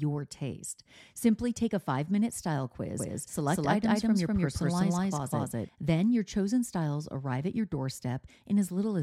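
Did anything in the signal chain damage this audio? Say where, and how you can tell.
Yes. A doubled audio track, likely from a second, slower capture path or an edit holding two out-of-step copies. From 2.99 to 5.69 s, after "a five minute style", a dry copy at roughly equal level trails about a fifth of a second behind, cutting in and out abruptly before "then your chosen styles".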